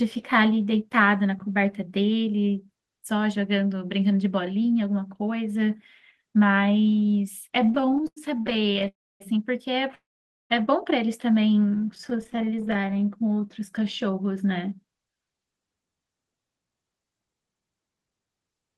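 From 7.63 to 8.88 s the speech breaks into repeated stalls (stutter). Late packets kept emptying the jitter buffer, so about 0.39 s of held-over sound is stretched in, with gaps up to 93 ms. The audio drags and jerks.

Two call audio freezes follow, at 8.88 to 9.22 s and 9.95 to 10.52 s. Packets were likely held up in transit. Each freeze is a brief fading buzz, then mostly silence, before the speech resumes where it stopped.

From 11.70 to 13.85 s a jitter buffer slow-down runs the speech at 93% speed and adds 156 ms. Sounds are drawn out at unchanged pitch. Within it, from 11.75 to 13.09 s, fine stuttering adds many tiny gaps of up to 15 ms.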